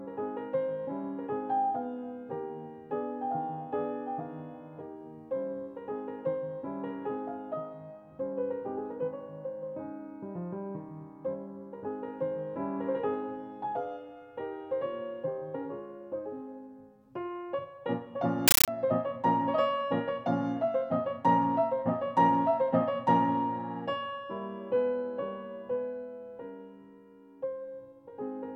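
From 18.48 to 18.68 s, the sound gives way to very loud, chattering static: 13.3 ms bursts of noise separated by silence, repeating 31.25 times a second. This is a compressed stream played as audio. Dolby Digital data, consistent with a 640 kbps AC-3 stream, was output as raw samples instead of being decoded.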